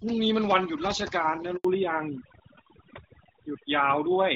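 Overdone noise removal runs through the whole speech clip. The suppressor cuts individual frequency bands whenever they sit near its noise estimate. Quiet parts of the voice vanish with them. The background drops and breaks up into twinkling specks.

At 1.57 s a handover gap begins. The call switches networks and no speech frames arrive. The voice dies within a few tens of milliseconds, then there is silence for about 80 ms until 1.65 s. Whatever was said in that stretch is gone.

From 1.65 s to the end comes a fallback to narrowband. Up to this point the wideband sound fits HD Voice at around 12.65 kbit/s. The call then drops to an older narrowband codec, likely AMR-NB at 12.2 kbit/s. Nothing above 4 kHz remains, so the voice turns duller and rougher.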